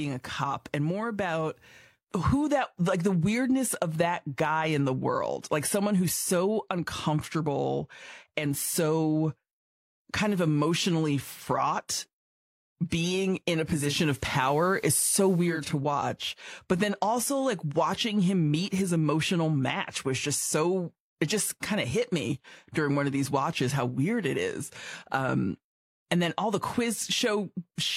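At 13.63 s, after "being in a", the digital radio blends to analogue FM over 464 ms: hiss appears, level shifts about 2 dB, until 15.77 s.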